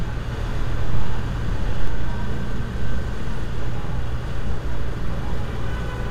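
From 0.32 s to 1.88 s a doubled audio track is heard: a second full-band copy of the sound trails the original by around 150 ms, roughly 5 dB quieter, with no decay or room colour. It likely comes from a slower capture path mixed back in, and it starts and stops abruptly.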